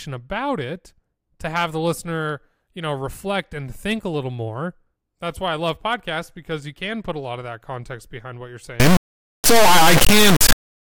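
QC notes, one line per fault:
8.80 to 10.83 s, integer read as float: Right after "context behind what you're", the speech turns into a loud, buzzing square-wave sound. It lasts to the end of the clip. The samples were written as 32-bit integers but decoded as 32-bit floats. Each bit pattern becomes a meaningless value, either close to zero or far too large. The output therefore flips between silence and the clipping limit, and that flipping produces the square-wave buzz.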